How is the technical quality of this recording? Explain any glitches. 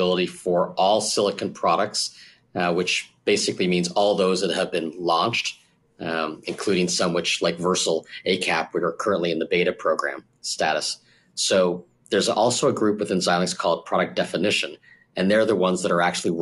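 Nothing here trips up the ear: there are no glitches to point to, just steady, uninterrupted audio the whole way through.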